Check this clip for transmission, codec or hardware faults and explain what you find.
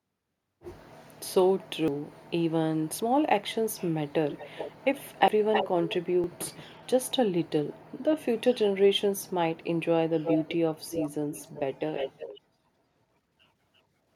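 There are two faults here: a few skips where the speech jumps ahead, and a delayed copy of the speech coming back in four stretches.

The skips land at 1.88, 5.28 and 6.24 s. Each is an abrupt jump, losing roughly a tenth of a second at 1.88 s and a bit less at the other two, with no gap of silence. The likely cause is a dropped buffer (overrun): the capture side didn't read its samples before the hardware overwrote them, so that chunk vanished and the audio either side got spliced together.

The echo comes in at 4.33 to 5.96 s, trailing the speech by 400 ms and about as loud as the speech itself. It returns at 10.24 to 10.56, 10.89 to 11.6 and 11.95 to 12.4 s, this time 345 ms behind and somewhat quieter. That's likely an echo leak: a far end on loudspeaker whose echo canceller let its mic pickup slip through and sent it back.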